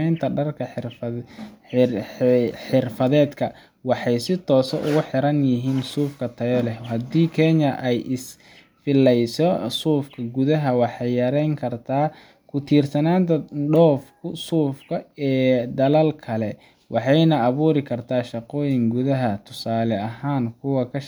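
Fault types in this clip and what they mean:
Nothing here to flag: no faults turn up anywhere in this recording.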